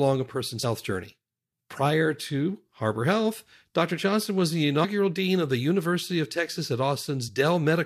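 At 0.63 s, just after "a person's", compressed frames are skipped. The speech jumps ahead by about 50 ms, which suggests two missing frames. At 4.83 s it happens again, between "was the" and "dean of the". Roughly 70 ms is lost, which fits about three frames. From 7.27 to 7.29 s a shorter gap of about 20 ms suggests one frame.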